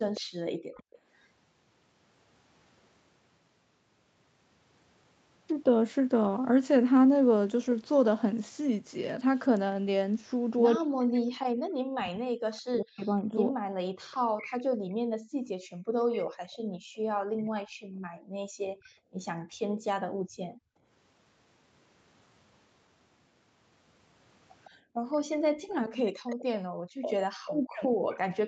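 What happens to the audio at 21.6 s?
Nothing goes wrong at 21.6 s; the speech passes through intact, with only the ordinary band limit near 8 kHz that the call's microphone processing and Opus coding impose throughout.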